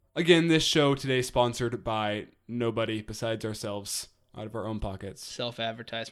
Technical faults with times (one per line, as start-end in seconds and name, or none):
none